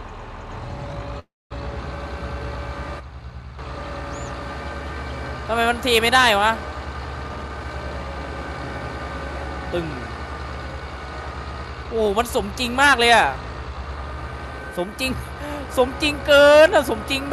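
A call audio freeze comes first, from 1.19 to 1.53 s: the last sound is carried on as a fading buzz that sinks into about 230 ms of silence, and then the audio resumes exactly where it stopped. A plain dropout would lose material. Here nothing is missing and the audio is simply pushed about 312 ms later, pointing to delayed packets that likely drained the jitter buffer. The jitter buffer speed-up then catches up that backlog twice. From 7.24 to 7.65 s the sound rushes at 145% speed, shedding about a fifth of a second. From 11.75 to 12.39 s a milder 107% squeeze trims a few tens of milliseconds. Pitch stays unchanged, which separates this from a tape-style speed change: whole pitch periods are cut out repeatedly, so only the pace hurries. Throughout, the call path's codec limits the top end to about 12 kHz, which fits Opus at a moderate bitrate.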